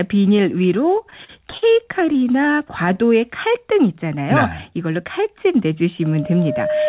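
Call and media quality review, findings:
Repeated stalls (stutter), 0.9–2.25 s: jitter buffer repeatedly running dry, late packets; receiver stretches last sound across short stalls up to 44 ms, about 200 ms filled in total. Audio drags and stutters, nothing lost.

Loudspeaker feedback squeal, 6.02–6.88 s, to end of clip: mic-to-speaker loop gain exceeding one at 610 Hz; tone swells over roughly a second to about the level of the speech.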